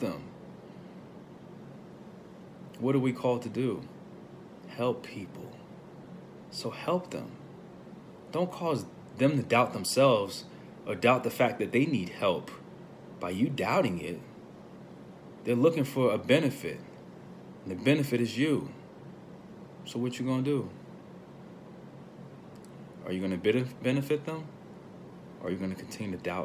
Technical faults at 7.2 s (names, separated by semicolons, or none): none